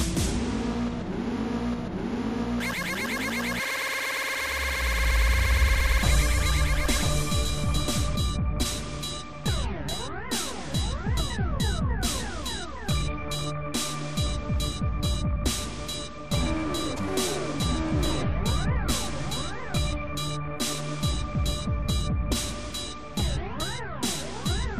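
A doubled audio track runs from the start to 8.16 s: a second full-band copy trails the original by about a second at roughly equal level, with no decay or room colour, then drops out abruptly. It is likely a slower second capture path mixed in.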